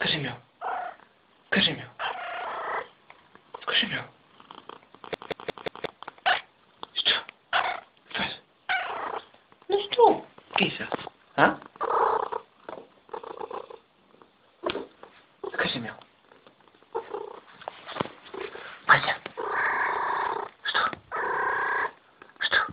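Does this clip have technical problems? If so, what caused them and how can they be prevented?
Yes. From 5.14 to 5.86 s the CD is stuck on one turn: a scratch jumps the laser back, so one 0.18 s slice repeats four times, muting at each jump. A spectrogram shows identical blocks split by thin gaps. Clean, undamaged discs prevent it.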